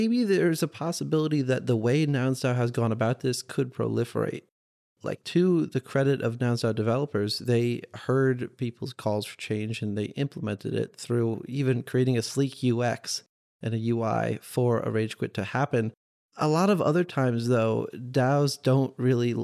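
Nothing in this speech recording stood out as a technical problem on listening.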